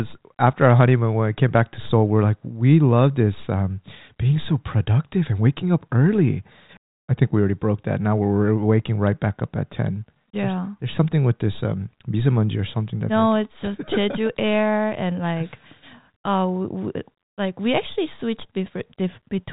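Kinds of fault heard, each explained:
No technical faults heard.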